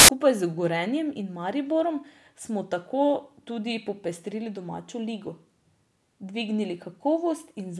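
File tags played as audio, from 0.00 to 0.09 s: the start of this speech clip is a cover picture's compressed bytes decoded as if they were samples. Because that data is effectively random, it comes out as a very loud burst of white noise with abrupt, hard edges.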